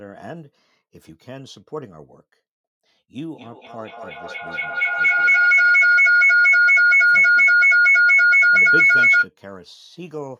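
At 3.19 s a feedback howl starts in the speech and runs until 9.31 s. A microphone and a loudspeaker sharing the room are closing a loop. Each pass adds gain, so the sound grows rather than decays and narrows to a tone near 1.5 kHz. It peaks about 18 dB above the speech and pulses roughly every fifth of a second, the loop's round-trip delay.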